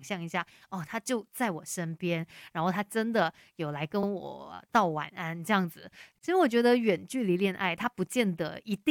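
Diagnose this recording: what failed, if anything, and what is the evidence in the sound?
Repeated frames at the codec or storage stage: the 46 ms block from 4.02 to 4.07 s plays twice, a short stutter that adds 46 ms to the speech.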